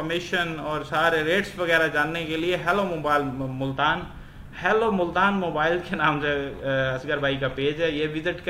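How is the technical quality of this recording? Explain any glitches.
The quality is compromised by one fault at the start. From 0 to 3.72 s there is crude rate conversion. Samples were simply dropped or repeated, with no filtering. The pattern fits a 48 kHz to 44.1 kHz change. The error sits roughly 25 dB below the sound and comes through as a gritty, inharmonic fizz that tracks loud and high passages.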